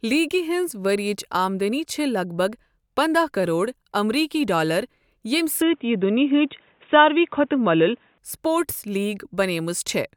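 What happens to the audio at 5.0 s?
Nothing goes wrong at 5.0 s; the speech runs on intact through that moment.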